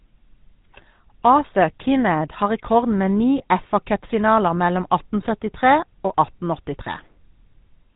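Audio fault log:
throughout: GSM full-rate codec. The speech has a plainly audible buzzy, gravelly roughness, which fits the 13 kbps full-rate coder. It rebuilds the voice from a vocal-tract filter fed by sparse, evenly spaced pulses, so the fine detail of the excitation is lost and replaced with a coarse, regular texture. On a spectrogram, energy stops sharply at 4 kHz with nothing above, and harmonics look smeared and grainy rather than clean.
3.38–3.42 s: lost GSM frames. The sound briefly locks into a rough, metallic ring, which points to a single dropped 20 ms frame. The decoder fills the gap by reusing the last good frame's settings, so the previous sound is held rather than continued naturally. On a spectrogram, this shows as a short, flat, smeared patch where the formants stop moving. The waveform shows a repetitive shape.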